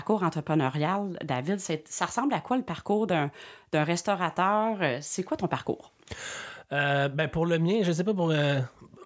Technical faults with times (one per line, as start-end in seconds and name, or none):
none